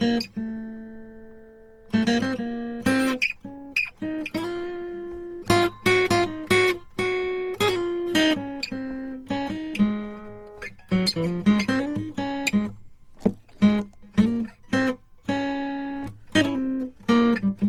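Throughout, generation loss makes the music swirly and hollow with blurred attacks, likely repeated Opus encoding at about 48 kbit/s; spectrograms show nothing above 20.2 kHz.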